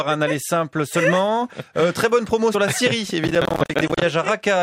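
From 3.27 s to 4.02 s a burst of processor overload crackle tears through the audio. The processor repeatedly fails to deliver its small buffers on time, and each miss drops in a short stretch of silence with hard edges. The spacing of the gaps fits buffers of around 10 ms, with dozens missed in that span. On the waveform these appear as many brief flat-line dropouts; on a spectrogram, as dense vertical broadband streaks that stop once the load eases.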